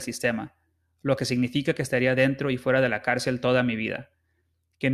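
A short bit of speech, and there's nothing technically wrong to point to anywhere in it.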